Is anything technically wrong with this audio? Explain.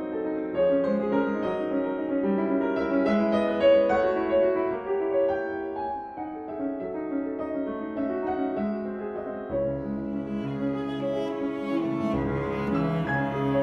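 No technical faults are audible.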